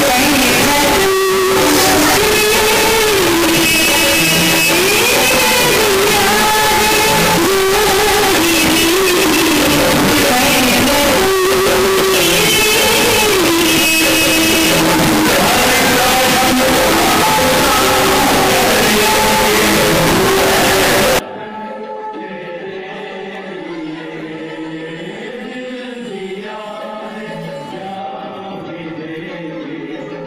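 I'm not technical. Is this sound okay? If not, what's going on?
No. From 0.0 to 21.19 s there is very loud, harsh distortion, and quiet moments blast as loudly as everything else. The likely cause is signed and unsigned mixed up: the numbers making up the sound were read in the wrong format, so every crossing through zero becomes a jump across the whole range.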